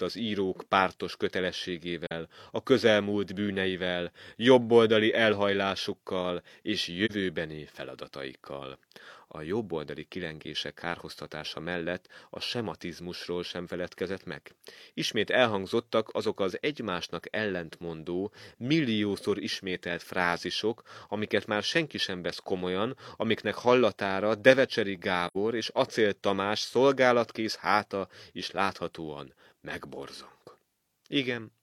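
Around 2.07 to 2.12 s and again at 7.05 to 7.11 s, the speech dips into a brief hole, and at 25.27 to 25.37 s there's a longer one. That's AAC frame loss with muting: the decoder lost a frame, two in a row at 25.27, and filled them with silence. The overlapping windows fade the sound out and back in, so each gap has soft edges. The first two are roughly one frame long, and the last is about double that.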